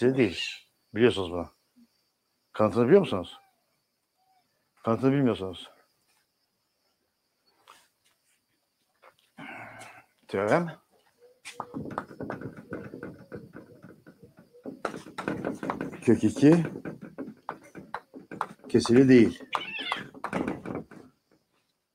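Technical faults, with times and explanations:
No technical faults detected anywhere in the audio.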